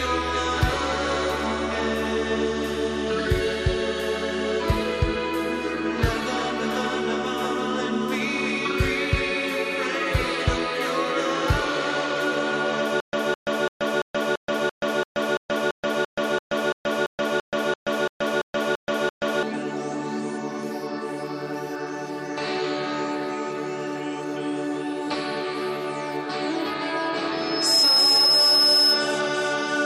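Stutter with silent gaps from 13.00 to 19.43 s: a 210 ms burst repeats 19 times, with 128 ms of digital silence between, likely a stalled stream replaying its last fragment.

Loudspeaker feedback squeal from 27.32 to 29.25 s: a 5.2 kHz tone swells within about half a second to roughly 10 dB above the sound, as the microphone-to-loudspeaker loop exceeds unity gain.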